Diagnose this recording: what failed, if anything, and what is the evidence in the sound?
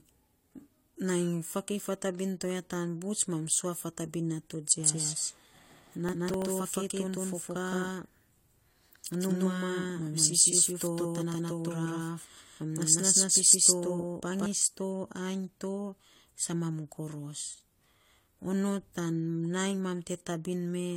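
Transcoding between lossy codecs, throughout the clip (codec stage). The speech has nothing above 16.2 kHz, and two layers of coding damage are heard together: smeared, swirly high-band texture under the sharper pre-echo and quantisation grain of a second encoder. This is likely a low-rate HE-AAC encode re-encoded as AAC-LC at around 64 kbit/s. The second encoder spent its bits on the first one's artefacts and added its own, and the lower band limit survived.

Doubled audio track, from 4.80 s to 14.46 s (capture or edit stage). Just after "mam sua fatabin nato", an exact second copy of the speech cuts in abruptly, about as loud as the original and trailing it by roughly 150 ms. It has full bandwidth and no reverberant decay or room colouring. Near "to ainy to" it drops out just as abruptly. This likely comes from the same signal being captured twice over paths with different latency, or from two misaligned copies left stacked in an edit.

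Processor overload crackle, from 6.09 s to 6.46 s (driver or buffer stage). A short burst of gritty, tearing crackle sits on top of the speech and stops cleanly once the load passes. The processor missed a handful of deadlines over that short stretch, which fits very small buffers of about 1.5 ms each. Each missed buffer was filled with stale audio, so every one splices in a hard-edged fragment, and together they form the crackle.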